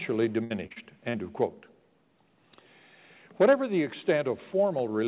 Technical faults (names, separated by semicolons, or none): repeated packet loss (robotic sound)